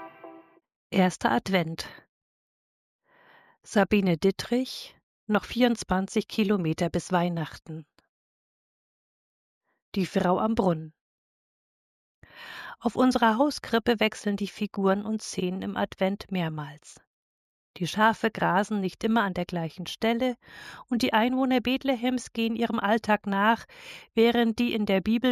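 The audio carries imaging from linear upsampling the whole way through. The top of the band sounds dulled, and there's a faint metallic shimmer between 8 and 16 kHz, around 30 dB down, where mirror copies leaked through the weak straight-line interpolation. That points to a 16 kHz source raised to 48 kHz.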